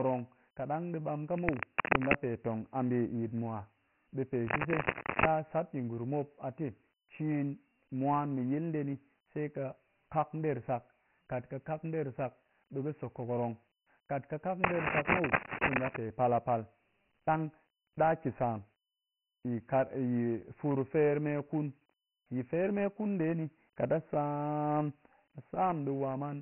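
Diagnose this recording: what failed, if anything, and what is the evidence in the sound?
The codec stage failed. The speech has gone through Dialogic VOX ADPCM, and the damage is heavy. Nothing is present above 3 kHz. At 24 kbps with 4-bit samples, that points to a 6,000-samples-per-second VOX encoding. A gritty, grainy hiss follows the speech throughout. On a spectrogram there is a hard ceiling at 3 kHz with empty space above it, and a speckled noise floor that rises and falls with the speech energy.

Cable scratch noise breaks in three times. It runs from 1.36 to 2.15 s, right after "ɗang ɗi ɓam ka", then from 4.47 to 5.26 s after "ɓe pe", and from 14.64 to 15.98 s, ending just before "pal a". Each burst is dense, uneven scratching that sits a few dB above the speech. The likely cause is in the analogue wiring: a worn cable or connector being moved, so its contact resistance jumps rapidly. 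The waveform shows ragged, spiky bursts, and the spectrogram shows broadband smears across the band.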